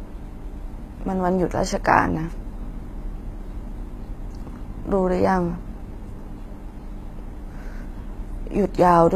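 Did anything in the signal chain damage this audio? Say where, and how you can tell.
Yes. Throughout the speech the top end sounds bright but synthetic, with s sounds gone gritty and lispy and nothing above about 14.9 kHz. This is likely HE-AAC compression at the codec stage: treble rebuilt from copied lower bands, which fits a low bitrate near 20 kbps.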